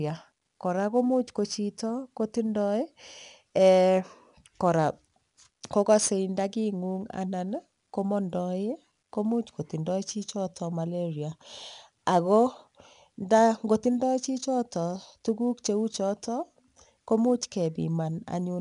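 From start to finish, the speech carries the signature of 4-bit ADPCM compression. Each sample is coded as a coarse 4-bit step from a predicted value, so the quantisation error becomes a broadband grit that rises and falls with the level and is plainly audible on louder syllables. Nothing is present above about 10.6 kHz, which points to a sample rate near 22 kHz and fits a stream of roughly 89 kbps.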